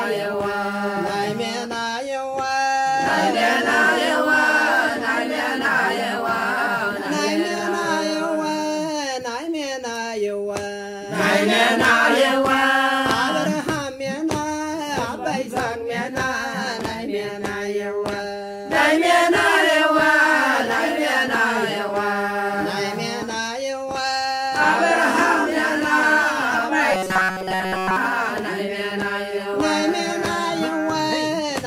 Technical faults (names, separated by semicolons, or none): robotic sound from repeated short buffers